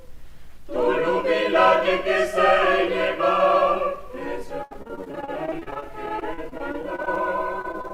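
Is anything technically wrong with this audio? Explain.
Yes. Repeated packet loss (robotic sound) from 4.63 to 7.18 s and 7.62 to 7.91 s: frequent short dropouts, up to 72 ms, patched by repeating prior audio, sounding choppy, with smeared, repeated spectrogram slices.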